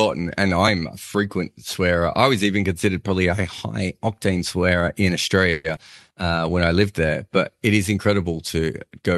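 A call audio freeze at 5.51 to 5.66 s, just after "high octane swearer in", stretches the last sound into a fading buzz or hiss, likely because delayed packets emptied the jitter buffer. Speech then resumes intact about 0.13 s late.

Short concealed packet loss at 5.76 to 5.79 s follows: roughly 40 ms of audio never arrived, and a brief synthesized fill smears across the hole, tightening the delay again.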